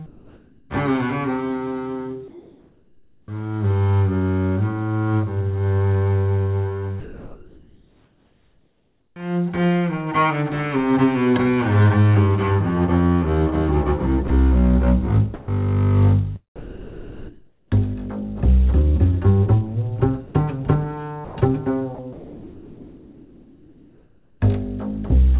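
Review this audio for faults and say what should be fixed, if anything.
Comfort noise in place of the background at 0.06–0.7 s, 2.28–3.28 s and 7.0–9.16 s. A steady, featureless hiss replaces the real background, about 8, 1 and 5 dB quieter. This is likely discontinuous transmission. Disabling DTX, or sending more frequent noise updates, would prevent it.

Onset clipped by the voice detector at 3.25–3.28 s and 9.13–9.16 s. About 30 ms of each start is missing, so the sound begins abruptly out of the filler noise. The likely cause is a slow voice detector. Adding look-ahead or a hangover margin to the detector would prevent this.

Sound chopped by the voice detector across 14.28–18.23 s and 20.27–24.41 s. Around 1.3 s and 2.5 s of quiet sound became noise fill. The likely cause is a detector toggling repeatedly. A more sensitive threshold, or turning off DTX, would prevent it.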